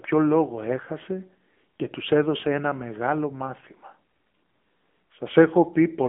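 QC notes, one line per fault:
Throughout: AMR narrowband mobile codec. The band is confined to a 200 Hz to 3.4 kHz telephone line, with nothing above 3.6 kHz. Plainly audible buzzy, synthetic speech texture comes from coarse pulse-excited vocal-tract modelling, fitting one of the lower AMR-NB modes near 8 kbit/s.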